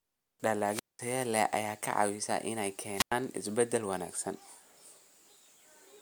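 At 0.68 s and again at 2.92 s, the speech hits a wireless microphone squelch dropout. The radio link fades, static swells, and the receiver mutes for about 200 ms, then about 100 ms. Speech resumes on "leh ayaa", then "isbeddel wanaagsan".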